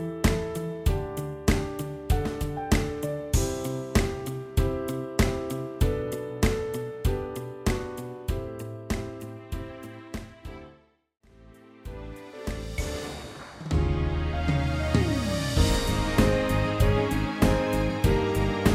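No technical faults can be heard anywhere in the audio.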